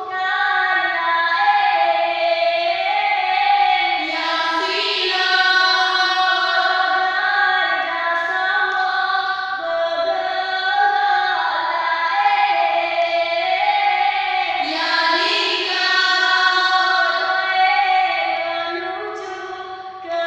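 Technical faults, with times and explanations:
Nothing stood out as a technical problem on listening.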